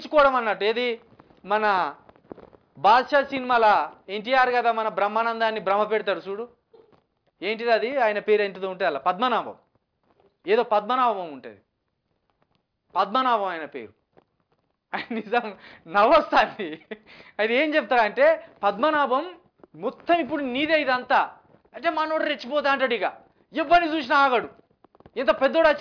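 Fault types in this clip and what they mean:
No technical faults are audible anywhere in the audio.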